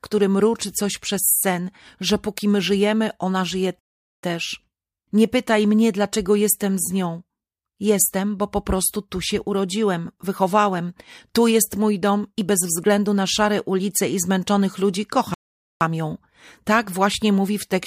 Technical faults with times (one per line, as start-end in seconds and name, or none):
3.79-4.23 playback stall
15.34-15.81 playback stall